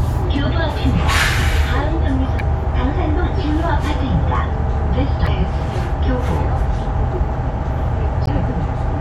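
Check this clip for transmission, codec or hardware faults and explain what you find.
There are three short codec faults. Damaged data in a compressed stream at 2.37–2.41 s, 5.24–5.28 s and 8.24–8.29 s: corrupted bytes throw the decoder out of frame sync, producing brief chirps or blips.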